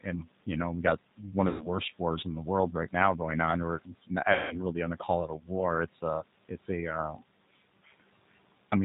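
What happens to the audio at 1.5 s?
Around 1.48 to 1.67 s there's VoIP packet loss concealed by the speech codec. About 120 ms of audio went missing, and the decoder kept extrapolating its last pitch and filter at falling gain, so you get a fading buzzy or noisy smear that stays weak until it settles.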